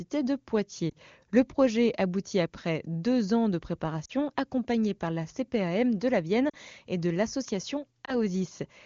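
Speech carrying lost AMR speech frames: brief smeared warbles at 0.90–0.93 s, 4.05–4.12 s (between "deux ans de" and "accompagné par la"), 6.49–6.55 s (just before "et de l'association"), and 8.06–8.18 s (after "et de l'association"). Each one fits one or two dropped 20 ms frames that the decoder filled by repeating the last good speech settings at falling level. What sets these apart from a plain dropout is that the sound stretches and fades instead of cutting to hard silence, with a rough moment as it recovers. Around them, the wideband AMR coding is clear, with little audible codec damage.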